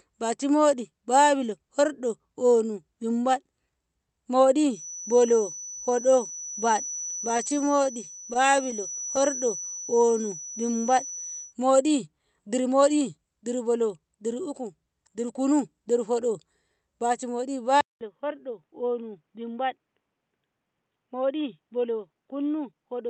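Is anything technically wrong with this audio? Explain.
Yes, several faults are audible in this speech clip.

From 4.68 to 11.55 s there is a feedback whistle, most likely a loudspeaker-to-microphone loop held just below runaway. It is a thin, slightly wavering tone at 5.9 kHz, about 15 dB under the speech. On a spectrogram it shows as a single horizontal line at that height.

From 6.81 to 9.22 s come repeated stalls (stutter). Packets arrived late, the jitter buffer kept running dry, and the receiver stretched the last sound to cover each wait. The stalls are brief, none longer than about 15 ms, but they fill 285 ms, roughly 12% of the span. The speech drags and catches. The waveform shows small repeated periods with no true dropouts.

From 9.01 to 10.12 s there is a jitter buffer slow-down. The receiver repeated single pitch periods to rebuild its reserve, adding 106 ms, so speech runs at 91% speed at unchanged pitch. 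Syllables sound drawn out. A spectrogram shows harmonics stretched in time but not shifted in frequency.

A jitter buffer speed-up runs from 12.12 to 13.25 s, with a shorter one from 19.41 to 19.78 s. In both, the receiver trimmed pitch periods to shed excess delay, cutting roughly 100 ms and 50 ms respectively. Speech runs at 110% speed, sounding hurried at the same pitch, and the spectrogram shows compressed syllables with no frequency change.

At 17.81 s the input switched to a poorer device, likely another microphone or a headset call profile. A 200 ms silence marks the switch. After it, the band is narrower than before, where the content had earlier extended toward the 8 kHz limit of the Opus call path. The level drops about 5 dB and a new noise floor appears about 50 dB down. The result is a duller, boxier sound. The spectrogram's upper band goes abruptly empty, and the waveform shows a gap followed by a smaller envelope.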